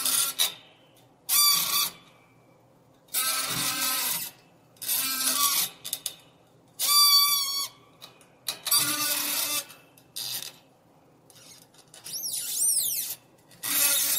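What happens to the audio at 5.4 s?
At 5.4 s the sound carries on intact, with no dropout, click or other fault at that point.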